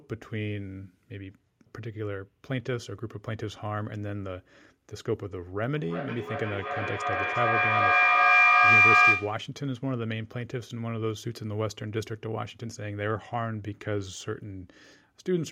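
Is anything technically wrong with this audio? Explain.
Yes. A feedback howl runs from 5.75 to 9.52 s. The sound from a loudspeaker is reaching a microphone on the same call in the same room, and each pass around that loop comes back louder, so the repeats build rather than die away. They narrow to a piercing tone around 2 kHz that pulses roughly every 400 ms, the loop's round-trip delay, and peaks about 12 dB above the speech before it stops at 9.52 s.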